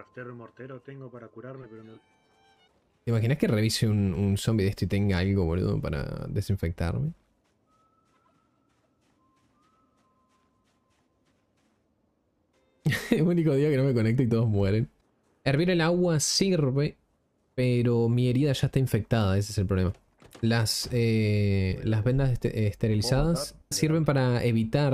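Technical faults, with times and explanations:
21.71 s, damaged data in a compressed stream: a single short blip, under 20 ms, where part of the encoded stream was damaged. The decoder misreads the affected frame, loses sync and hunts for the next valid frame header, so the output briefly glitches before normal decoding resumes. On a spectrogram it shows as a thin vertical disruption, and on the waveform as a brief irregular spot that breaks the surrounding shape.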